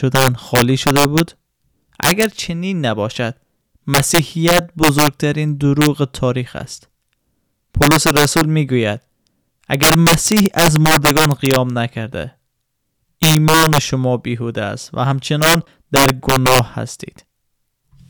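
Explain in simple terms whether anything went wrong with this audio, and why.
Something did go wrong here, and it lasts through the whole speech clip. The fault is integer overflow. The signal was pushed too loud for the number format holding it. Instead of being held at the top limit, the loudest peaks wrapped around to the opposite extreme. Only a small share of the audio, around one or two percent, crosses that limit. But each crossing jumps across the full range. So the louder moments carry harsh, violent cracks, far sharper than ordinary clipping.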